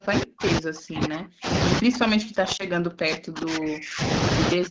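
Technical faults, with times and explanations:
0.0 to 1.49 s, 1.8 to 4.06 s and 4.52 to 4.7 s, speech suppressed in double talk: the voice drops by about 40 dB in each span, sinking almost to silence. This is likely an echo canceller that could not tell the near talker from loudspeaker echo while both sides spoke, so it turned everything down. The waveform shows flattened stretches, and the spectrogram shows the speech bands fading toward an empty background.
2.57 to 2.65 s, lost AMR speech frames: one 20 ms speech frame was lost, and the AMR-WB decoder filled the gap by repeating the previous pitch and vocal-tract settings at lower gain. This produces a brief dip or warble. The voice then returns weak or rough until the decoder settles. On the waveform there is a short sag in amplitude. On the spectrogram the harmonics thin out and smear for a moment before normal detail comes back.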